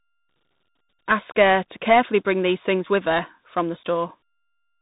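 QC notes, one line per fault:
Throughout: tandem speech coding. The sound has passed through two speech coders in a row, with what sounds like an ADPCM stage such as G.726 at 32 kbit/s, then a G.711 A-law hop, then CVSD at 64 kbit/s. Each coder re-encodes the damaged output of the one before. Errors stack up. The result is rough and grainy. Nothing is heard above 3.8 kHz, so it also sounds muffled.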